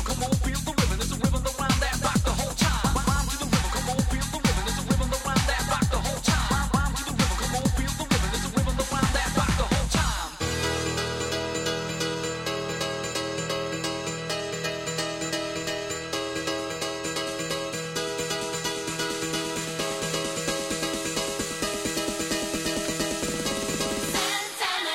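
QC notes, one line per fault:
No faults to note.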